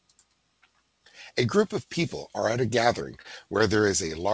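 At 3.22 to 3.26 s, a short stall from a late packet holds the speech: the emptied jitter buffer stretched the last sound about 26 ms, skipping nothing, unlike a dropout.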